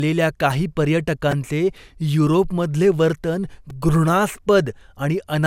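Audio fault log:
throughout: generation loss. The speech sounds swirly, hollow and smeared beyond what a single encode would produce, with consonant attacks softened. This is likely from decoding and re-encoding with MP2 around 128 kbit/s several times, each pass requantising on a shifted frame grid so noise and spectral gaps pile up. A spectrogram shows nothing above 16.7 kHz, with flickering holes and blurred, patchy bands, and transients smeared along the time axis.
1.32 s and 3.70 s: repeated buffer. Each event is a brief buzzy click rather than a stutter, because a tiny slice, about 2.7 ms long, which fits a 128-sample buffer, replays back to back with a hard join each time. The device reused the last buffer when fresh audio was late, losing about 10 ms at 1.32 s and about 5 ms at 3.70 s. The waveform shows identical short cycles with step discontinuities, and the spectrogram shows thin vertical lines at each join.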